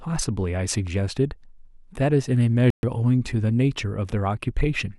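A digital broadcast dropout runs from 2.70 to 2.84 s. The speech cuts to silence for about 128 ms, consistent with the receiver muting after a few frames were lost or failed their checksum. It resumes once good frames arrive, and what was sent during the gap is gone.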